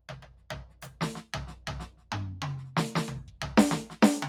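A noise suppressor built for speech is applied to this music throughout. It treats sustained tones and decay as noise, so gain swings by roughly ten decibels and the music pumps and thins as held material is pulled down while attacks pass.

Sound cut by the noise suppressor occurs three times, each dipping by about 10 dB. The first runs from 0.0 to 1.0 s, affecting most of that second. Shorter cuts fall at 1.87 to 2.11 s and 3.24 to 3.4 s. In each, sustained content sinks and tails end abruptly.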